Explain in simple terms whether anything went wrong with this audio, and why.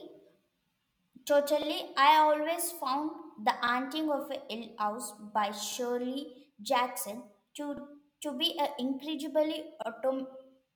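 Yes, something went wrong. The speech has overlapping chunks. It was handled in 2-second pieces, and each piece starts 50 ms early. That sliver plays twice, so a small stutter is heard at 1.62 s (just before "I always found the"), 3.67 s, 5.72 s, 7.77 s (before "to be") and 9.82 s.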